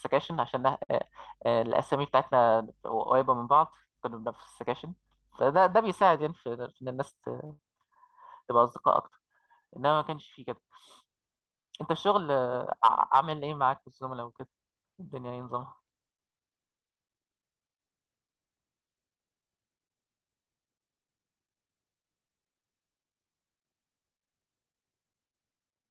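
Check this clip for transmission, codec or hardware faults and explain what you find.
Three kinds of network fault are audible in this speech, all typical of a real-time call, with the audio band-limited at about 12 kHz by the call codec.

Short stall from a late packet, at 0.83 to 0.90 s and 7.46 to 7.51 s: a sound is briefly held too long, for 55 ms and then 33 ms, with a faint buzzy sustain. A packet arrived late, the jitter buffer ran dry, and the receiver stretched the last sound until the packet arrived. Nothing is lost, but each stall adds as much delay as it held.

Jitter buffer speed-up, from 6.28 to 6.83 s: the speech sounds slightly rushed, running at 107% speed with unchanged pitch. The buffer had built up more audio than its target, so the receiver trimmed out short pitch-period slices repeatedly, removing about 50 ms in total to bring the delay back down. The speech rhythm tightens for just over half a second.

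Burst of packet loss, from 7.53 to 7.60 s, immediately after the second stall: the last sound is held and fades out over 61 ms, and then the speech resumes about 60 ms further on, with that stretch missing. Several consecutive packets never arrived in time. The receiver extended the last sound and faded it down, then skipped ahead once real audio returned.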